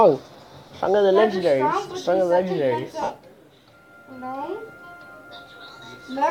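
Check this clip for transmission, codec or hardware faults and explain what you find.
There are lost LE Audio frames, in two places. Light lossy compression also sits under the whole clip, with only a slight effect.

From 0.69 to 0.71 s, about 15 ms of audio drops out. From 3.02 to 3.10 s, about 67.5 ms is lost, mostly in one run of roughly 70 ms. The gaps fit 7.5 ms frames. The LC3 decoder fills each gap by repeating the last spectrum with random signs. The short gap is a brief noisy blip. In the longer gap, tones smear into noise and then fade.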